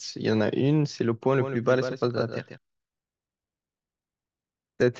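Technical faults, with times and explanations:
1.36 to 2.58 s, doubled audio track: a second copy of the speech runs about 150 ms behind the original, roughly 10 dB quieter, so each syllable is followed by a faint, dry repeat. It carries the full band with no decay or room colour, and it cuts in and out abruptly at the edges. The likely cause is a slower second capture path mixed in alongside the main one.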